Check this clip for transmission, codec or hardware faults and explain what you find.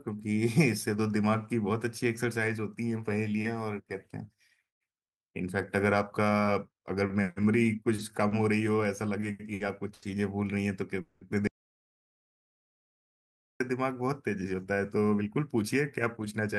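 There are four kinds of fault in the later part of the speech, all of them network or capture problems. The call path's Opus coding, with its top end stopping at about 12 kHz, fits roughly a 40 kbps setting.

Short stalls from late packets happen at 7.95, 8.28, 9.20, 9.54 and 9.94 s. Each time a packet showed up late, the jitter buffer ran dry and the receiver held the last sound for 20 to 80 ms. You hear a sound drawn out with a faint buzz, and then the speech resumes with nothing lost.

A call audio freeze runs from 11.01 to 11.23 s. The sound hangs on as a fading buzz for about 200 ms and then picks up where it left off. The likely cause is packets held up long enough to empty the buffer completely.

The audio drops out to dead silence from 11.47 to 13.60 s. That's just over 2 s of silence, with no room tone at all, and the speech from that stretch is gone. It was likely the input cutting out, such as a disconnected device or a stray mute, while recording carried on.

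A jitter buffer speed-up runs from 14.36 to 16.49 s. The receiver trimmed tiny pitch-period slices over and over to drain excess buffered delay, cutting around a fifth of a second. The speech plays about 8% faster at unchanged pitch and sounds rushed.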